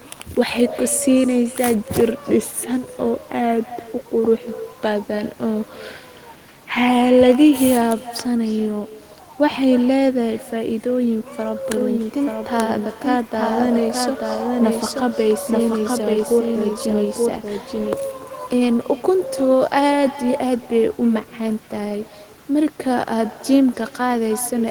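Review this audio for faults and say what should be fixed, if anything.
Echo with no canceller runs through the whole speech clip: a quieter, thinner copy, about 18 dB down, trails every phrase by roughly a third of a second, because the far end's loudspeaker feeds its microphone. A spectrogram shows faint, smeared repeats of each syllable's energy just behind it. Enabling acoustic echo cancellation at the far end, or having that listener use a headset, would prevent it.

From 11.77 s to 17.93 s, a full-band second copy of the speech, about 5 dB quieter, follows roughly a second behind and starts and stops abruptly. This is likely a doubled audio track from a duplicate capture path. The waveform shows each burst repeated a second later, with hard edges at both ends. Muting the duplicate source or removing the extra track would fix it.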